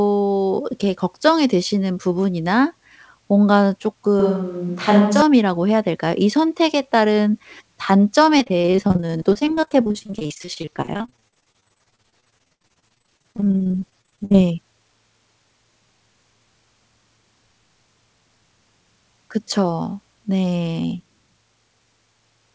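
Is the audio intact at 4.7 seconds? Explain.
No. From 4.20 to 5.22 s the sound turns roomy and hollow, with thinner bass and faint room noise roughly 40 dB below the speech, while the level barely changes. This points to a switch to a distant microphone, likely because the close microphone dropped out and a farther pickup took over. It differs from added reverb because the tone changes abruptly at both ends, losing low end rather than just gaining a tail.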